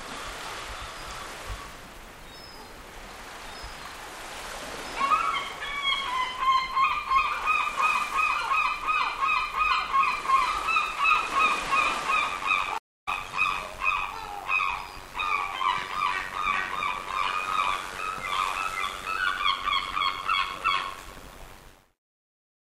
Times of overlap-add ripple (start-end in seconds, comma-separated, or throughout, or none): 12.30-22.63